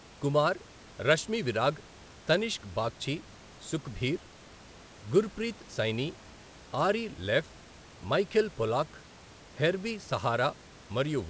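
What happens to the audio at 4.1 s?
Nothing goes wrong at 4.1 s; the speech there runs on intact, carried through the call path with the band ending near 8 kHz and the room noise sitting about 26 dB below it.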